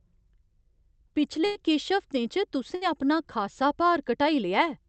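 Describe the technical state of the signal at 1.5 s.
The last sound is held and fading for about 97 ms, 1.45–1.58 s, then speech resumes with 60 ms missing: a burst of packet loss, concealed by extending earlier audio.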